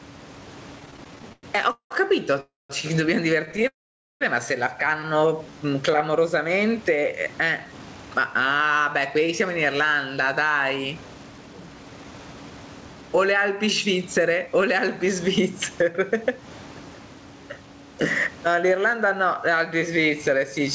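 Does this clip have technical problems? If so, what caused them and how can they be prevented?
Yes. The speech has several faults.

Gain pumping runs through the whole clip. The gain swings about 15 dB, pulling loud and soft parts closer in level so the sound is squashed. The likely cause is microphone gain set far too high, with a fast limiter pulling it down on every peak. Prevention: lower the input gain so the limiter rarely acts.

Repeated stalls (stutter) occur from 0.80 to 1.93 s and from 3.46 to 3.65 s. The audio keeps catching and dragging. In the first span, repeated filler makes up 40 percent, with the longest gap 191 ms. In the second, the gaps last up to 13 ms. Packets kept arriving late, so the jitter buffer ran dry and the receiver stretched the last sound each time. Prevention: fix the unstable network or give the jitter buffer more headroom.

A call audio freeze occurs from 2.41 to 2.72 s, lasting 290 ms, and another from 3.67 to 4.23 s, lasting 532 ms. 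In each, the sound trails off into a fading buzz or hiss and then silence, 190 ms and 480 ms of it. The audio then resumes where it stopped. The likely cause is packets held up in transit. Prevention: improve network stability.

Jitter buffer slow-down runs from 5.33 to 6.12 s. The speech plays at 90 percent speed with unchanged pitch, and sounds are drawn out. The receiver repeated pitch periods, adding 90 ms, to rebuild a low buffer. Prevention: steadier packet delivery.

Jitter buffer speed-up runs from 7.58 to 14.85 s at 109 percent, trimming about 0.7 s. It recurs from 18.46 to 19.09 s at 106 percent, trimming about 40 ms. The speech sounds hurried at normal pitch, because the receiver cut short pitch periods to drain excess buffered audio. Prevention: avoid bursty delivery.

The faint room noise sits well below the speech. The call codec passes nothing above 8 kHz.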